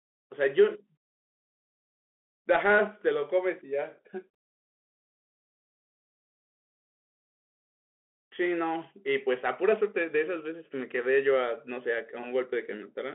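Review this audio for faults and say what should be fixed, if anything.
Throughout the clip the speech sounds thin and boxed-in, with a fine granular hiss beneath it, scratchy s sounds, and a gritty edge on louder bright moments. That is the Bluetooth CVSD headset codec: each sample is coded as a single up-or-down bit, which fits a 64 kbit/s stream, so fast, loud high content outruns the adaptive step and distorts. The band runs roughly 250 Hz to 3.4 kHz, with nothing above 3.8 kHz. To prevent it, record through a wideband connection or a wired microphone rather than the headset's narrowband call profile.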